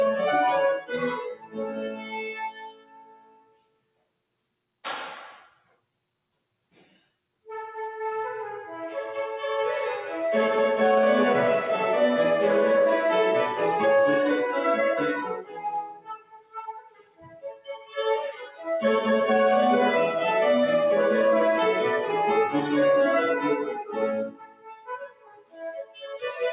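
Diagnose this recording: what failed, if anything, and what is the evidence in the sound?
Throughout the recording the level pumps and thins. Sustained material sinks by around 20 dB while onsets push through. This points to the call processing stage: a speech-tuned noise suppressor applied to music or sounds, misreading steady tones, ambience and decays as noise to remove.

The sound is cut by the noise suppressor hardest at 0.77–4.19 s, 5.49–5.96 s, 6.62–7.46 s, 15.23–17.98 s and from 23.79 s to the end, each dropping about 20–21 dB, and more lightly at 18.32–18.66 s, about 12 dB. In those spans the suppressor judged the held sound stationary and clamped its gain.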